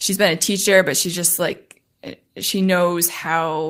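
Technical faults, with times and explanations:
Nothing in this speech clip points to a technical problem, so there's nothing to list.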